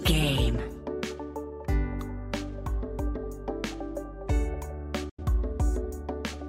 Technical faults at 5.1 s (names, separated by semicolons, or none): digital broadcast dropout